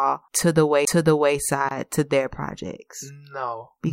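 At 0.85 to 0.87 s the speech breaks with a small tick and a very brief silence, then resumes from a different point, as if a fragment were missing or repeated. This is a CD skip: a knock or disc flaw threw the laser onto another turn of the spiral.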